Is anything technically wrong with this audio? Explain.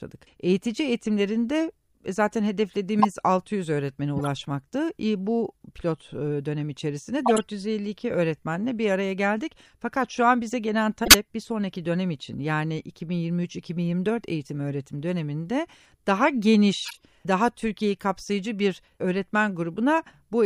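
Yes. Corrupt frames were decoded at 2.99–3.05 s, 4.16–4.27 s, 7.26–7.42 s (after "pilot e dönem içerisinde"), 11.05–11.15 s (between "şu an bize gelen" and "bir sonraki dönem için") and 16.82–17.02 s (after "eğitim öğretim döneminde daha"). In each, a handful of damaged compressed frames were played anyway, so misread data scattered energy into wrong frequencies. Each is heard as a brief chirp or noise burst, the loudest peaking near −5 dBFS.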